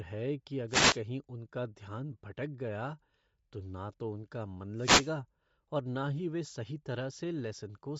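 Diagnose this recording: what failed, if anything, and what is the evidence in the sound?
Codec stage: throughout, the upper band sounds grainy and noise-filled rather than merely muffled, likely Bluetooth LC3 compression at around 32 kbps.

Radio link: wireless microphone noise hits appear as swishes of static at 0.68–1.00 s after "है कि" and 4.73–5.16 s after "तो उनका मन". Noise swells over the signal as the link fades, unlike silent dropouts.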